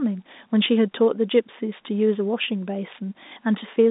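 No faults are audible; the speech sits within G.711 telephone coding's 200 Hz to 3.7 kHz line band with nothing above 3.8 kHz, as that format should.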